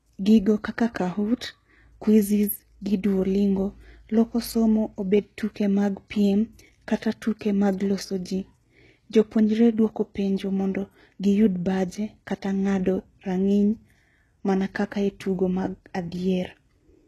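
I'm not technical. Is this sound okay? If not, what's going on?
No, the whole clip has plainly audible HE-AAC compression damage, likely the cause: nothing above 12.3 kHz, and the s sounds come out gritty and a bit metallic.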